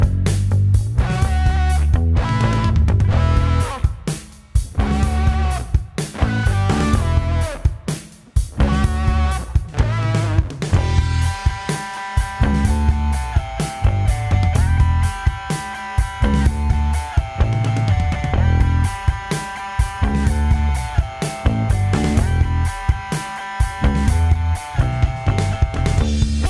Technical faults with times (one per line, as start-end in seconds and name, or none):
none